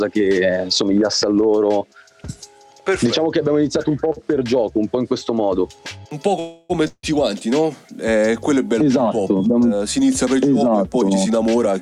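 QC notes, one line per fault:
6.39–6.72 s, call audio freeze: the last sound is stretched into a fading buzz for about 0.3 s, then the audio resumes exactly where it stopped, nothing skipped. This is likely packets held up in transit emptying the jitter buffer, adding delay rather than losing content.
6.88–7.05 s, long network dropout: the sound trails into a fading hiss for about 156 ms, then about 50 ms of silence, and resumes further on. About 160 ms never plays, likely lost packets, so unlike the freeze above there is a jump, not a pause.
11.01–11.74 s, jitter buffer speed-up: the audio runs at 125% speed while pitch stays put, sounding hurried. The receiver trims short pitch-period slices repeatedly, roughly a fifth of a second in total, to shrink excess buffered delay. The unchanged pitch distinguishes it from a simple fast playback.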